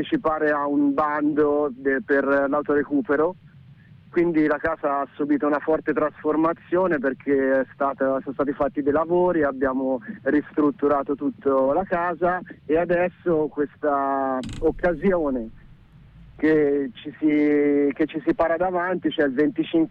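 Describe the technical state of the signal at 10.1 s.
At 10.1 s the signal is intact, with no dropout, distortion or other fault audible at that moment.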